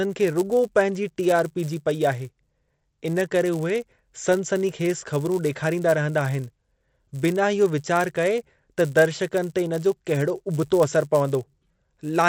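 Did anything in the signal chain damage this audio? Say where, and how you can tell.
Yes. Throughout the whole clip a steady buzz at 100 Hz rides on the speech. It is present only while there is signal and drops out in the pauses. That buzz is a resampler restarted on every block. The rate conversion, which sounds like an upsampling from 16 kHz to 48 kHz, processed each 10 ms block in isolation, so every block boundary carries a small edge error. Those errors repeat at the block rate, 100 times a second.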